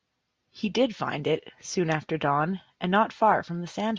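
Nothing stood out as a technical fault on listening to the speech in this recording.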